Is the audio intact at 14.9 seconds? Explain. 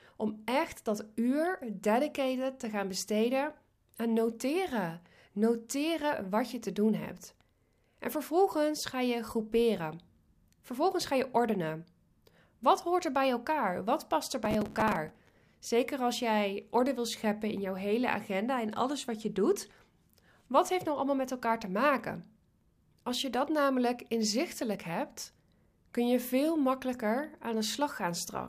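No. At 14.9 seconds the speech sits inside a burst of processor overload crackle running from 14.45 to 15.41 s, just after "past er". The processor keeps missing its deadlines for small buffers of roughly 5 ms, dozens in a row. Each miss replays a scrap of old audio with hard edges. Together they make a gritty tearing over the voice.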